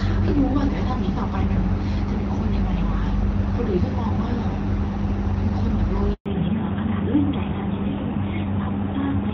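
A phone call in speech switched networks at 6.14 s, and during that handover gap no speech frames came through, so the sound dies away and stays silent for 120 ms until the new link resumes at 6.26 s, with whatever was said in between lost. From 6.26 s to the end, the call drops from HD Voice to an older narrowband codec: everything above 4 kHz is gone, leaving the sound duller and rougher, a step down from the light coding up to then, which fits AMR-WB at about 12.65 kbit/s.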